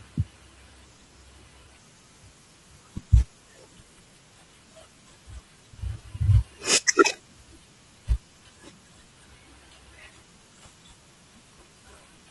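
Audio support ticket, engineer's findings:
Rough, grainy speech throughout, with noise filling between harmonics and a dull, synthetic-sounding top band. Likely cause: low-delay AAC compression (AAC-ELD-style short frames) at a low bitrate, roughly 32 kbps. Short frames resolve pitch harmonics poorly, and at this bitrate bits run short.

Brief smeared, noisy patches at 1.63–1.66 s and 6.23–6.26 s. AAC frame loss with concealment: each gap fits a single lost 20 ms frame, which the decoder patched from the previous good spectrum instead of true signal, leaving a phasey blur.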